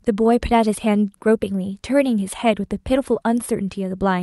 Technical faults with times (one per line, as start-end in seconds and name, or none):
none